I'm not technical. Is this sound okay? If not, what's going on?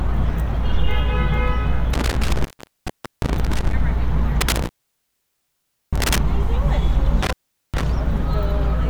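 No. There is an intermittent contact fault at three points: around 1.93 to 3.73 s, 4.41 to 6.18 s, and 7.23 to 7.84 s. A loose cable or plug briefly loses its connection, so the sound drops out for about 0.78 s, 1.24 s and 0.41 s respectively, with crackling as the contact breaks and remakes. During each gap, faint hiss is left.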